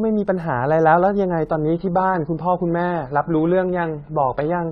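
From 1.50 s to the end, an adaptive stream at a lower bitrate abruptly strips treble above 5.2 kHz without a gap, leaving a flat spectrogram ceiling.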